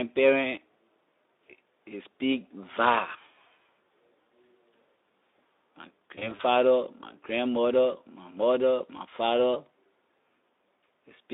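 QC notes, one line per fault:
6.15–6.41 s: VoIP packet loss concealed by the speech codec. About 100 ms of audio goes missing in short gaps of up to 40 ms, spread over 240 ms. The decoder extrapolates each gap into a fading smear, which leaves the sound weak briefly afterwards.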